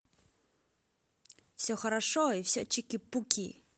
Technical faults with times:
1.92-3.77 call bitrate drop

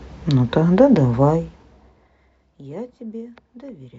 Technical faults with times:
none

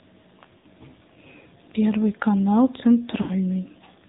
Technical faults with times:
0.00-4.08 AMR narrowband mobile codec
0.58-0.66 lost AMR speech frames
3.22-3.33 lost AMR speech frames

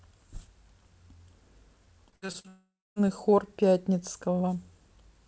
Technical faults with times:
2.10-2.46 repeated packet loss (robotic sound)
2.48-2.98 long network dropout

